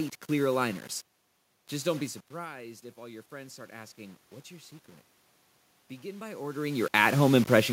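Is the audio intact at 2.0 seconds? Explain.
No. The automatic gain control is rising across 1.70 to 4.79 s: the speech level drops by about 17 dB as the talker moves back around 2.0 s, and the control slowly adds about 5 dB of gain, so voice and background swell together over roughly three seconds.

Throughout the clip, including this moment, a grainy distortion tracks the speech, sitting only around 20 dB below it and turning quiet passages gritty. This is likely low bit depth without dither: rounding to just 6 bits leaves an error that follows the signal.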